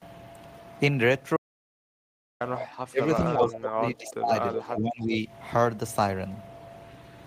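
From 1.37 to 2.41 s the speech cuts to silence for about 1.04 s, with no room tone. This audio dropout to silence likely comes from a lost input.

At 2.56 to 2.66 s an echo leak appears. A faint copy of the voice returns about 373 ms late, roughly 15 dB down. A far-end canceller likely missed its loudspeaker pickup.

From 2.77 to 3.03 s the voice dips by up to about 30 dB. This is speech suppressed in double talk, likely the canceller ducking both talkers at once.

Echo leaks again from 3.26 to 3.52 s, about 20 dB down, with a 374 ms delay. Suppression follows from 3.37 to 4.33 s, with drops near 30 dB.

A louder echo, only about 10 dB down, sounds from 4.51 to 4.63 s. The last suppression runs from 4.57 to 5.25 s, dipping about 15 dB.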